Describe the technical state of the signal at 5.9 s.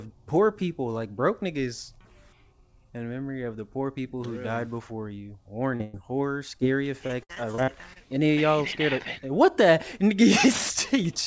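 At 5.9 s the signal is inside a burst of packet loss that runs from 5.84 to 5.95 s. About a tenth of a second of audio never arrived in time to be played. The receiver covered the gap by extending the last sound it had and letting it fade as the gap went on. It comes across as a held buzz or a fading hiss. The audio then picks up further along, with the missing stretch simply gone.

Just before it, from 5.76 to 5.82 s, there is a short concealed packet loss. Roughly 40 ms went missing, and the decoder patched it by continuing the preceding sound before blending back into the real signal. That leaves a brief smear or wobble, and a short sound can drop out there. Both events sit in audio with nothing above 8 kHz, which fits a wideband call codec such as G.722.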